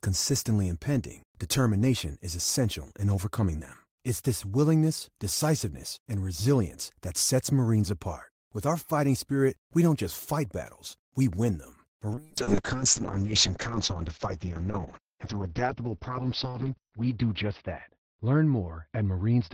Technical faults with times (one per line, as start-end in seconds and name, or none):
12.17-19.53 call bitrate drop